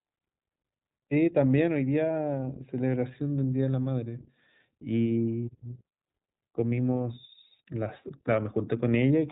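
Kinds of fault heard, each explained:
iLBC codec: narrowband coding of each 20 ms frame independently leaves this speech rough and synthetic, with nothing above about 3.8 kHz, consistent with a 15.2 kbps mode.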